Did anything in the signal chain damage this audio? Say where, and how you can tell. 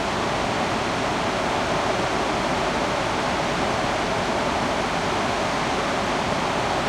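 Yes, in the analogue stage: a switching supply whistle runs throughout. It is a thin, high tone wandering between about 7.1 and 9.4 kHz, some 40 dB below the sound. A switching power supply, running in audible burst mode or beating with another supply, is leaking into the analogue path, shifting pitch as its load changes.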